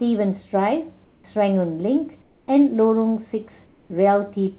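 Discontinuous transmission likely cut the sender's stream during speech pauses, so the receiver substituted comfort noise in place of the background at 1.04–1.24 s, 2.22–2.48 s and 3.66–3.90 s. The real room tone, already about 36 to 38 dB below the loudest speech, gives way to a flat, featureless hiss about 3 to 4 dB quieter. This adds a faint dip and texture change in each gap, over audio that stops at 4 kHz, consistent with narrowband G.711.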